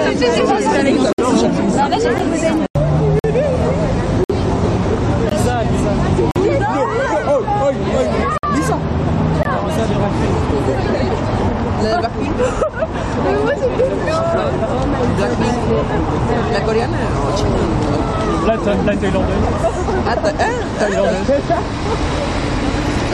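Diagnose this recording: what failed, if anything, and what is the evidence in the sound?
Gap between stream segments, network stage: segment timestamps misalign, so playback pads hard-edged 11–58 ms silences at 1.13, 2.18, 3.19, 4.24, 5.29, 6.31, 8.38 and 9.43 s, about every 1 s. These appear as blank vertical stripes in the spectrogram and flat silent runs in the waveform.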